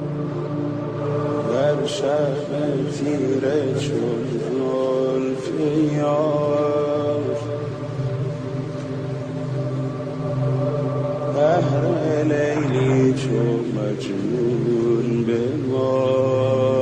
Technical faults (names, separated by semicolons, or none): none